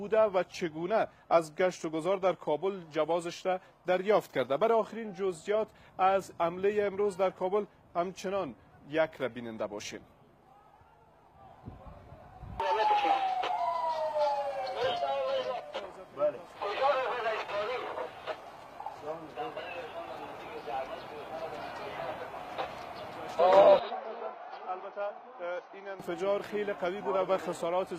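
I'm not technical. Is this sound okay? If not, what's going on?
No. An input switched to a poorer device from 23.79 to 26.0 s: the sound abruptly turns duller, with nothing above 6.2 kHz, a little quieter, with faint new background noise. The likely cause is the recording jumping to another, lower-quality microphone without any gap.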